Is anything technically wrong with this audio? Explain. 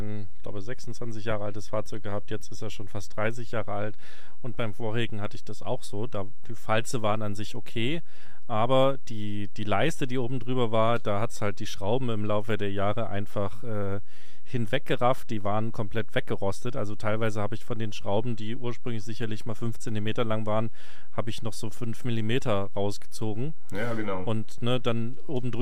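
Yes. A DC offset runs through the whole speech clip, at about -21 dBFS. The waveform sits on a constant shift away from zero, so it is not audible as such, but it eats into headroom and appears as steady energy at 0 Hz in the spectrum.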